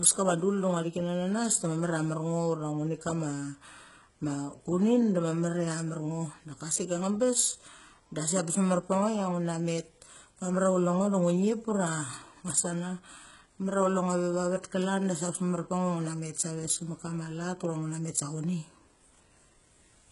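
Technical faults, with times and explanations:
Throughout, HE-AAC compression: the speech is heavily degraded, with nothing above about 11.2 kHz and treble that sounds bright but synthetic, giving s sounds a gritty, lispy, metallic edge. The likely cause is HE-AAC at a very low bitrate, around 12 kbps judging by the damage. Only the lower spectrum is coded, and the upper bands are rebuilt by copying lower content upward under a coarse envelope, so the harmonics fail to line up across the crossover.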